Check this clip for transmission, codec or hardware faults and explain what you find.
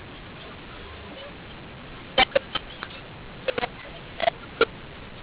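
A mu-law and A-law mix-up runs through the whole clip. The speech was coded as A-law telephone audio but decoded as mu-law, so every level maps wrongly: some samples grow, others shrink, and near-silent ones jump well up. The speech sounds harsh and distorted, and the pauses fill with noise.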